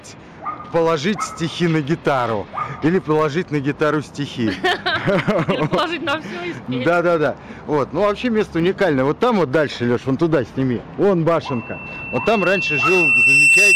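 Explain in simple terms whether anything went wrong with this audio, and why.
Three things went wrong. There's hard clipping throughout: the level is pushed past what the system can handle, so a small share of the loudest peaks get chopped flat and crackle.

At 1.85, 3.19 and 8.6 seconds you'll hear sharp clicks, likely from dropped samples. A tiny fraction of a millisecond goes missing, and the waveform jumps.

From 11.43 seconds to the end, there's loudspeaker feedback squeal. A microphone picks up its own speaker, and a 2.7 kHz tone swells over about two seconds until it's well above everything else.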